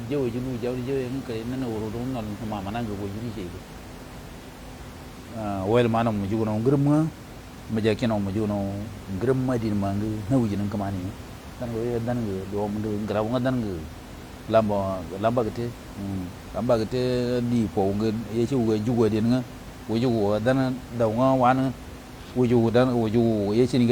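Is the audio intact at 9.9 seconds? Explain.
Yes, the audio is intact at 9.9 seconds, with only the room's own background noise sitting about 16 dB below the speech.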